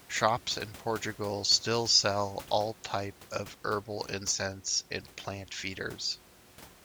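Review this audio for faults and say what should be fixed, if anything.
Nothing to fix: no faults found in this speech, and the room's ambient floor sits about 22 dB below the talker as part of the recording itself.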